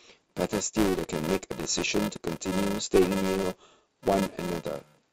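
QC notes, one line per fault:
Throughout, filter restarted on every block: a 375 Hz buzz, fitting 128-sample blocks, rises and falls with the speech, unlike steady hum that persists through pauses.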